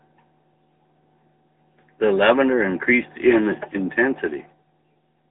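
The speech has passed through the AMR narrowband mobile codec for its whole length, with the signal squeezed into an 8 kHz-sampled phone channel and rebuilt from a vocal-tract model fed by sparse pulses. The sound is confined to roughly 250 Hz to 3.7 kHz, with nothing above 3.8 kHz, giving a thin, boxy telephone tone. Coding damage is plainly audible as a buzzy, synthetic edge, at a level that fits the 10.2 kbps mode.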